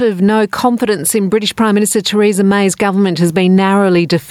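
Gain pumping runs through the whole clip. The gain swings by around 5 dB, flattening the level differences. The likely cause is input gain set far too high, with a fast limiter clamping down on peaks.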